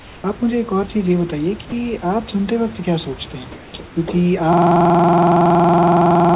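Speech carried over a narrowband call link, with nothing above 4 kHz, shows three kinds of fault. Comfort noise in place of the background appears at 0.0–0.24 s, 3.52–3.74 s and 3.86–3.96 s. There the real room background, about 24 dB below the speech, turns into a flat, featureless hiss about 2, 1 and 4 dB quieter. This is likely discontinuous transmission, and it differs from a dropout because only pauses are affected. At 1.7 s the voice detector likely drops sound: a 20 ms slice of the speech itself is replaced by the same steady noise, so the loss falls within speech rather than in a gap. From 4.53 s to the end, a system hang loop repeats one 46.44 ms piece exactly, giving a mechanical 21.5 Hz stutter that fits a 2048-sample ring buffer. Its exact, unchanging repetition distinguishes it from ordinary packet-loss glitches.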